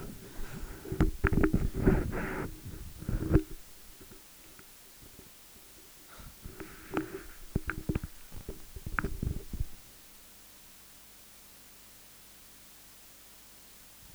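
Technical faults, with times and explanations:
Throughout: low bit depth with dither. The audio is stored with very few bits, which fits 8-bit samples, and dither noise was added before each value was rounded. This turns what would be gritty rounding distortion into a steady, even white noise. The result is a constant hiss sitting only about 20 dB below the signal, yet free of any harsh distortion that follows the sound.
8.31 to 8.67 s: processor overload crackle. For just over a third of a second, the processor falls behind and misses buffer deadline after deadline, roughly twenty of them, consistent with buffers of around 3 ms. Each missed buffer is filled by replaying a stale slice of earlier audio, joined with hard edges. That rapid string of small repeats and discontinuities is heard as a gritty, tearing crackle laid over the sound, ending abruptly once the load eases.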